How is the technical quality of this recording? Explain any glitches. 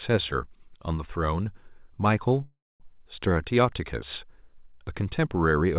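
The speech has one glitch, a call audio freeze, heard through a narrowband phone-style path with nothing above 4 kHz. From 2.44 to 2.82 s the sound stalls. The last sound is stretched into a fading buzz or hiss that dies into about 220 ms of near-silence, and then the speech resumes exactly where it stopped, with nothing skipped. The likely cause is delayed packets draining the jitter buffer, so the receiver filled the roughly 360 ms wait with a decaying continuation. Because no audio was dropped, everything after the freeze plays that much later than it would have.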